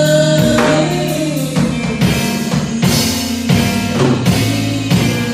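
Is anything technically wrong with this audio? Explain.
Yes. Repeated frames at 0.51 to 0.56 s: a 46.4 ms block, which fits two compressed frames, plays twice, causing a brief stutter and adding 46.4 ms.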